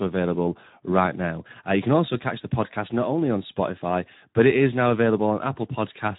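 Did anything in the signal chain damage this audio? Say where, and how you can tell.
Yes. The damage sits at the codec stage, and it runs through the whole clip. The speech has the hoarse, noisy texture of Speex codec coding, and it is plainly audible from start to finish. Speex is a CELP codec that models the voice with a filter driven by an excitation signal. Here that excitation gets too few bits, so it can't follow the real waveform closely. The roughness points to a low setting, around 11 kbps.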